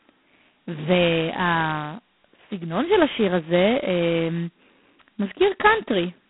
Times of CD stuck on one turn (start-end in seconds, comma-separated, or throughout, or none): none